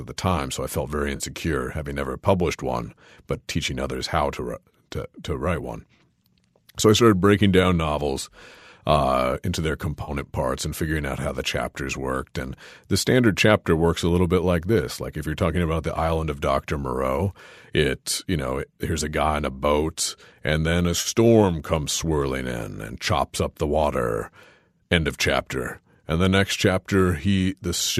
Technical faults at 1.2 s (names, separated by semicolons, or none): AAC frame loss with concealment